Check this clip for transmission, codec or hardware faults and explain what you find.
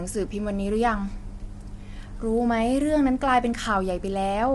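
One codec fault runs through the whole speech clip. The voice sounds rough and grainy throughout, with noise between harmonics and nothing above 11.6 kHz. This is likely low-delay AAC compression, with short frames resolving pitch poorly at a bitrate that fits about 32 kbps.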